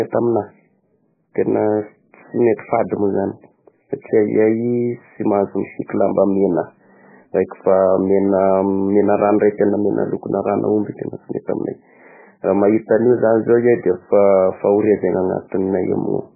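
Speech, heavy MP3 compression throughout: dull and watery, nothing above 2.5 kHz, swirling artefacts, likely from a very low bitrate, fitting roughly 8 kbps.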